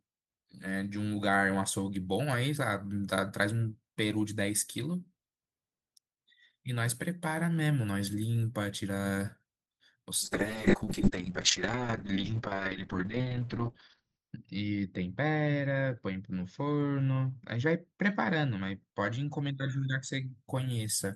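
A call bitrate drop runs from 10.26 s to 20.41 s. The call's bandwidth estimate fell and the encoder was pushed to spend far fewer bits, coding the speech more coarsely and narrowing the audio band from 20 kHz to 6 kHz. The speech turns muffled, rough and watery, consistent with a fall from around 32 kbps to roughly 6 kbps, and sits at its poorest for 3.96 s before recovering.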